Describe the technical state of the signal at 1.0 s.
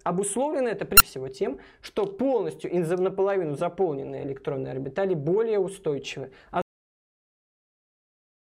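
At 1.0 s the signal is hit by damaged data in a compressed stream, spanning about 0.97 to 1.01 s, roughly 36 ms. Bytes in the encoded stream at that point are corrupt, so the decoder misreads or rejects the affected frames, loses frame sync and has to scan forward for the next valid header before normal decoding resumes. The result is a brief, unnatural chirp or blip in place of the intended audio.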